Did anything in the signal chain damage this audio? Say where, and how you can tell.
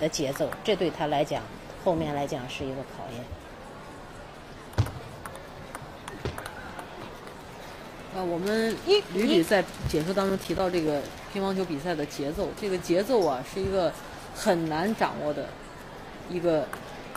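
Yes. CD scratch ticks appear from 9.86 to 11.16 s, at the storage and playback stage: ten regular clicks, roughly eight a second, the longest about 10 ms. A disc blemish exceeds error correction on each revolution, so the player interpolates or mutes the damaged samples.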